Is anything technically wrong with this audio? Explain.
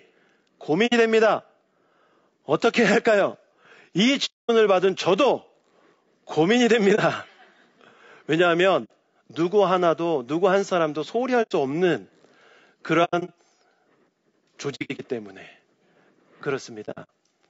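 Yes. Throughout, the speech sounds rough and grainy, with noise between harmonics and a thin, synthetic-sounding top band. This is likely low-delay AAC compression (AAC-ELD) at a low bitrate, around 32 kbps.

Soft-edged dips and holes appear at 0.86–0.94, 4.25–4.50, 6.95–6.99, 8.84–8.91, 11.42–11.52, 13.04–13.30, 14.75–15.00 and 16.85–17.09 s. This is AAC frame loss with muting. The decoder zeroes the missing frames, and the overlapping windows fade the sound out and back in. The longest hole, at 4.25 s, lasts 240 ms. The last three are broken into scattered gaps, the longest around a tenth of a second.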